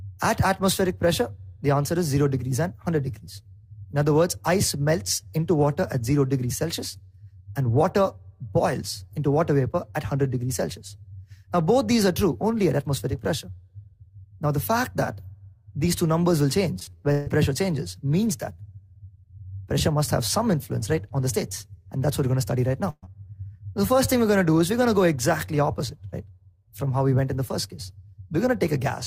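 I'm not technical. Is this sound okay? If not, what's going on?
No. From 16.79 to 17.28 s the sound turns choppy and robotic, stuttering through five short holes, the longest about 142 ms, so nearly half of that half-second is patched rather than real. This is repeated packet loss (robotic sound). The audio travels in small chunks, and here chunks kept going missing or arriving late. Each time, the player stretched the last bit of sound to cover the gap, and the next gap came almost at once.

At 22.90 s there is a single short break lasting about 0.14 s. The sound briefly holds and fades, drops to silence for a moment, then picks up again slightly further along, with roughly 120 ms of the original missing. This is a burst of packet loss: a handful of chunks in a row were lost together, and the player filled the hole by continuing the last sound and turning it down until the real audio returned.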